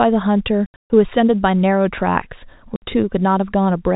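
From 0.66 to 0.90 s, packet loss filled with silence cuts about 220 ms of the speech into gaps, the longest 140 ms. A shorter 60 ms hole follows at 2.76 s. Gap lengths fit 20 ms packets, and the holes have hard edges in the band-limited telephone sound.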